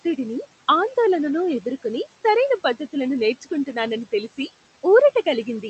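Throughout the clip there are noise suppressor artifacts. The room noise, about 18 dB under the speech, is pulled down by about 17 dB in the pauses and comes back under each phrase. The pumping follows the speech frame by frame, which sets it apart from a steady hiss or a slow automatic gain change.

From 1.07 to 1.57 s the sound slows by about 5.6% and drops about 101 cents, roughly a semitone. Speed and pitch move together in one abrupt step, so the likely cause is a drift correction step resampling to rebalance a clock buffer. A gradual wow would glide instead.

Between 4.30 and 4.49 s, speech cut by the noise suppressor dips the speech by up to about 14 dB for about a tenth of a second in total, so soft sounds come out swallowed. Unlike a packet dropout, the audio fades down with the background rather than going silent or glitching. Across the clip, the Opus call path limits the top end to about 8 kHz.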